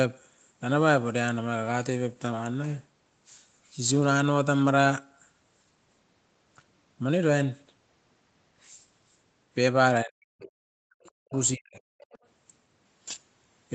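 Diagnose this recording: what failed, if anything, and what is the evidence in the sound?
The failure is in the call processing stage, at the echo canceller. The talker's speech is pulled down hard three times: 10.04 to 10.97 s, 11.29 to 11.36 s, and 11.55 to 11.94 s. The first and last dips go down by roughly 40 dB, close to silence. The brief middle one drops about 25 dB. This pattern is speech suppressed in double talk. The likely cause is that the canceller mistook near-end speech for loudspeaker echo while both sides were talking, and attenuated everything together.

Also in the echo canceller, short scraps of the other side's voice leak through: 10.41 to 10.49 s, 11.03 to 11.11 s, and 12.0 to 12.18 s. They sit roughly 25 to 30 dB below the talker, so they come through as faint fragments. They cluster around the suppressed stretches, within the same double-talk episode. Residual echo is likely getting past the canceller's adaptive filter, alongside a band-limited call path that tops out near 8 kHz.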